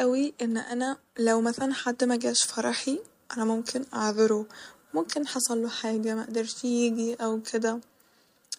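Nothing in this speech recording stands out as a technical fault, so there's nothing to flag here.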